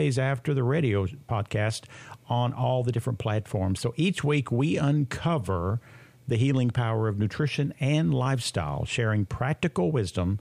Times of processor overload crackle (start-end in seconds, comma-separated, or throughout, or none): none